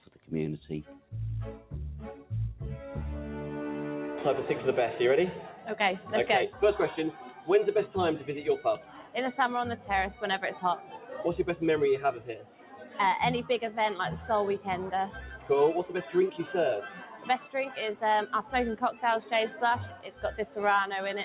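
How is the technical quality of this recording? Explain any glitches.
The technical quality is compromised by a speech noise suppressor that was left active on non-speech audio. Its gain rises and falls by around 10 dB across the whole recording. The content sits in a narrow band with nothing above 4 kHz, which fits a narrowband G.711-style call path.

Noise suppressor applied to music or sounds: The suppressor is built for speech, so it treats sustained tones, ambience and reverberant tails as noise to remove. Onsets pass through, then the level sags as each sound holds or decays. The result is an audible pumping and thinning. On a waveform the envelope looks chopped, with sharp attacks followed by premature collapses. On a spectrogram, sustained energy fades in blotchy patches.

Sound cut by the noise suppressor: There are six stretches where it bites hardest: 0.05–2.31 s, 5.54–9.86 s, 10.77–11.13 s, 12.18–12.99 s, 14.58–17.29 s, and 18.43 s to the end. 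In each, steady or fading material is pulled down by about 9 to 11 dB while the attacks survive, so tails vanish early. A waveform shows abrupt amplitude dips after the transients. A spectrogram shows decays cut off into sudden dark gaps.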